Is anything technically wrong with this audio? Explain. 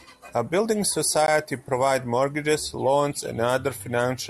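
Yes. A block of digital silence at 1.27 s, just before "provides mortgages loans": about 15 ms of samples drop to zero with no fade, likely from an output buffer not filled in time, heard as a sharp tick.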